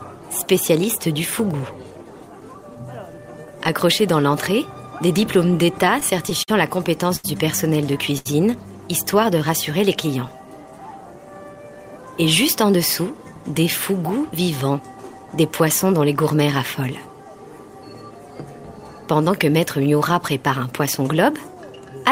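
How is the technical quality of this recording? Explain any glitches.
The recording has clear network playback glitches in four places, all from packet timing rather than lost audio.

From 5.57 to 6.50 s there is repeated stalling (stutter): the sound drags and catches seven times, holding about 105 ms in total, up to 50 ms at once, because late packets kept emptying the jitter buffer.

At 7.16 to 7.26 s and 8.18 to 8.27 s come two short stalls from a late packet. A sound hangs for 79 ms, then 74 ms, with a slight buzz or dip, while the receiver stretches it until the delayed packet lands.

From 11.34 to 12.64 s a jitter buffer speed-up makes the audio run about 10% faster at unchanged pitch, sounding hurried. Tiny pitch-period slices totalling around 150 ms are cut to shed excess buffered delay.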